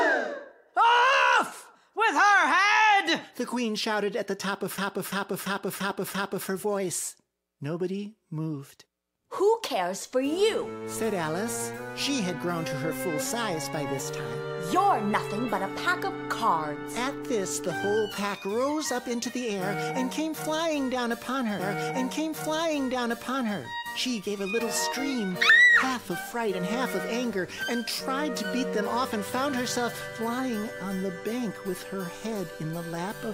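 From 4.78 to 6.49 s there is a system hang loop. The machine froze while the hardware replayed its ring buffer. One 341 ms piece repeats five times, at 2.93 Hz, which fits a 16384-sample buffer. It sounds like a stuttering, machine-gun repeat. Almost nothing is lost.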